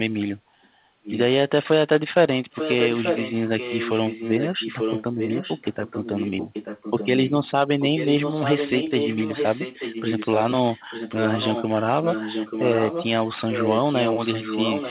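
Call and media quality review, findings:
Echo leak: delayed repeat of the speech at 1.03–1.18, 2.51–3.32, 3.58–7.09, 7.25–7.31, 7.8–10.51, 10.7–11.64, 12.03–13.07 and 13.51–14.9 s. Fixed 885 ms lag, level from faint to matching the direct speech. Likely cause: the far-end echo canceller failing to remove the loudspeaker signal its microphone picked up. A discrete copy at a constant delay, not the smooth decay of room reverb.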